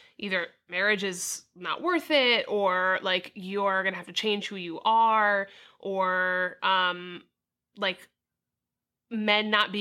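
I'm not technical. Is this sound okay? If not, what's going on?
Yes, nothing in this speech recording stands out as a fault at any point.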